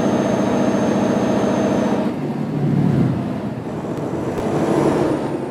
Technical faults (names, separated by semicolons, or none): chunks out of order